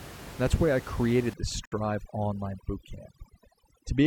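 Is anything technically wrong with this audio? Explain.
Yes. From 1.34 s, just after "that's why I created", overdone noise removal clamps bands near the noise estimate, leaving twinkling specks. Unlike gating, it is spectral.

A gap at a join of encoded pieces opens at 1.65 to 1.72 s: about 67 ms of encoder padding. Unlike a dropout, sound resumes where it stopped.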